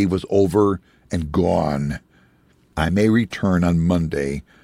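No technical faults can be heard anywhere in the recording. The speech carries on steadily, with nothing breaking into it at any point.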